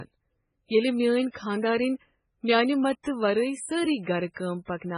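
From start to finish the speech carries heavy damage from what is likely MP3 compression, and the sound points to a very low bitrate, something like 16 kbps. The encoder ran short of bits, so it chopped the treble flat, with nothing above 10.5 kHz, and dropped the quieter frequency detail, which flickers in and out between frames. You hear it as a watery, swirly texture, metallic chirps on the s sounds, and consonant attacks that come out smeared.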